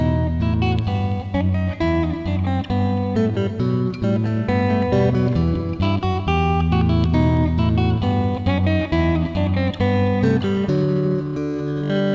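No faults can be heard in this sound, which has passed through a call path whose codec leaves nothing above 8 kHz, consistent with G.722 at 64 kbps.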